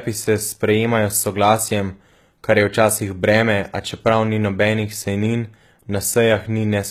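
Throughout the speech, s sounds come out gritty and lispy, with bright but metallic treble, likely HE-AAC compression at a bitrate near 20 kbps, rebuilding the upper band from copied lower bands.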